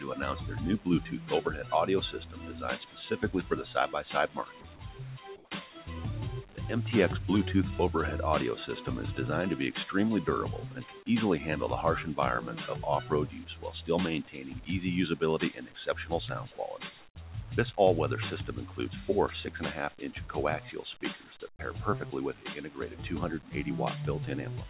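A speech-tuned noise suppressor applied to music or sounds runs throughout, treating sustained content as noise; levels swing by around 10 dB, giving a pumping, uneven waveform envelope.

From 0.0 to 6.58 s, sound is cut by the noise suppressor for roughly two seconds in total, dipping by up to about 16 dB. Held parts and decays sink while attacks survive, visible as notched, shortened tails on the spectrogram. Within that stretch, from 5.36 to 5.51 s, the background becomes a flat, detail-free hiss about 3 dB quieter for 150 ms, likely comfort noise substituted during a transmission pause; it shows as a smooth, uniform band.

The suppressor cuts again from 10.69 to 11.09 s (up to about 15 dB, roughly 300 ms affected), from 13.03 to 17.19 s (about 15 dB, roughly 1.5 s affected), and from 19.9 to 23.54 s (about 15 dB, roughly one second affected). Each appears as sudden energy holes after onsets.

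The call path's band limit shows as nothing above 4 kHz, which fits G.711 A-law.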